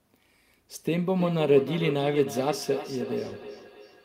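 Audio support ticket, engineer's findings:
Feedback echo between two devices from 1.18 s to end. Speech returns roughly every 0.3 s, thinner each pass, peaking about 11 dB below direct. Second device's output re-captured; its canceller misses foreign playback.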